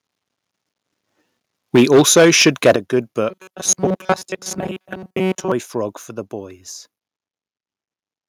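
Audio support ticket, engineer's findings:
Microphone overload, 1.74–2.76 s. Peaks driven about 9 dB past full scale, tops flattened, roughly 7% of samples clipped. Harsh crackle on the loudest syllables. Second, shorter burst 4.09–4.13 s, about 3 dB over, a few percent clipped. Component: likely mic input gain set too high. Converter hits its ceiling and squares off each peak, adding distortion products.

Microphone volume stepped down at 1.76 s (about 2 dB), 2.76 s (about 9 dB) and 4.05 s (about 2 dB). Sudden level drops in speech and background together. The 2.76 s step lands right where the long overload ends. Probable component: likely the call software's automatic input gain control. It sees clipping or excess level and cuts the device's input volume in one jump, not a gradual fade.

Robotic sound from repeated short buffers, 3.29–5.52 s. Speech turns into a rigid metallic buzz at 188 Hz that still roughly tracks the syllables. 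The period of about 5.3 ms fits repeated blocks of roughly 5 ms. Most of the audio in this span is replayed, not real. Probable component: likely a starved capture or playback buffer. Fresh audio arrives too seldom, the last block is looped, and the true signal is skipped.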